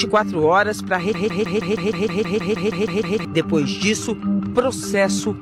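From 1.14 s to 3.25 s there's a broken-record loop: a 0.16 s slice repeats 13 times, likely a stalled player or stream, and the real audio is lost.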